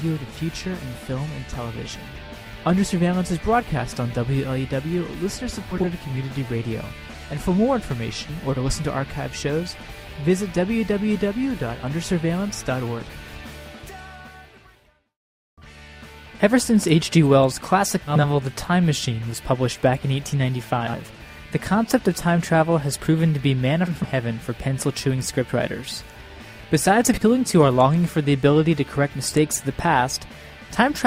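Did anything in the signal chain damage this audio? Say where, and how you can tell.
Yes. Six brief garbled flutters, at 5.71–5.85, 13.17–13.34, 18.08–18.25, 20.81–20.94, 23.87–24.06 and 27.14–27.22 s. This is frames out of order at the network stage: two adjacent blocks of 40 to 80 ms arrived swapped and were decoded as received, so each stretch plays its halves exchanged, which fits 20 ms frames. Nothing is lost, and the timing stays intact.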